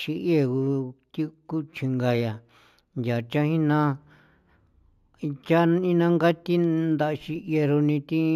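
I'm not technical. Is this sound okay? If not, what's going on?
No. Throughout the speech there is imaging from linear upsampling. The audio was converted to a higher quality setting in a crude way, by joining the original points with straight lines. That leaves the top end dull. It also leaves faint mirror copies of the sound between about 8 and 16 kHz. You hear them as a light metallic shimmer on hissy sounds like s. The sound points to a jump from 16 kHz to 48 kHz.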